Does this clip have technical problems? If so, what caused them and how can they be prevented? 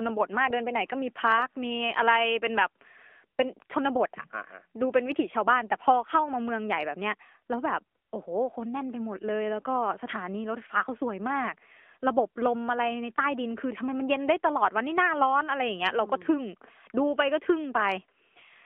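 Yes. Throughout, the speech sounds thin and boxed-in, with nothing below 200 Hz or above 3.4 kHz, and carries a plainly audible buzzy, synthetic edge. That is the AMR narrowband mobile codec. It rebuilds the voice from a vocal-tract model driven by a few pulses per frame, and the coarseness fits its 10.2 kbps mode. To prevent it, record or transfer the audio over a wideband or lossless path rather than a narrowband phone call.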